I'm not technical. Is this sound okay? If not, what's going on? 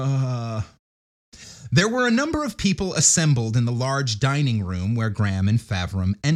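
Yes, no faults heard here.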